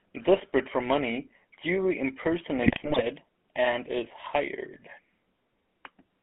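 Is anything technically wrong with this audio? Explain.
Yes. Throughout, the speech has a buzzy, gravelly roughness and sounds boxed in, with nothing below about 200 Hz or above 3.4 kHz. This is the GSM full-rate codec, whose character fits 13 kbps. It rebuilds the voice from a vocal-tract filter driven by a sparse, regularly spaced pulse excitation, and that coarse excitation produces the grainy buzz.

From 2.62 to 3.02 s, just before "and is hired", the speech breaks into squawks, pops and gargling. These are GSM bit errors at an error rate of about 2.6%. Corrupted filter, pitch and gain values reach the decoder, which warps the spectrum and causes sudden level jumps frame by frame.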